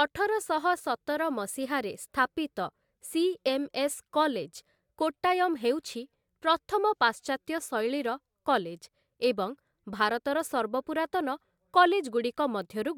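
Nothing here stands out as a technical problem; the speech runs along without any audible glitches, dropouts or other faults to point to.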